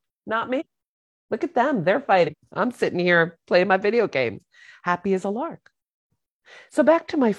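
Compressed frames were skipped twice in this speech clip: the decoder never played whole chunks of the encoded stream. The speech jumps ahead by about a fifth of a second at 0.56 to 0.66 s and again at 2.23 to 2.34 s.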